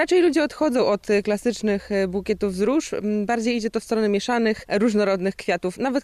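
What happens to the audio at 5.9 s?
Nothing goes wrong at 5.9 s: the audio runs through that moment intact, with no dropout, click or other fault.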